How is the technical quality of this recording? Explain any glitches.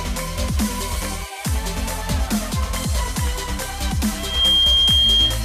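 A loudspeaker feedback squeal spoils the final second. From 4.16 to 5.44 s, a loudspeaker-to-microphone loop runs away at 3.2 kHz, swelling within roughly a third of a second to a piercing tone about 10 dB above the sound. A spectrogram shows one bright horizontal line, and the waveform envelope balloons.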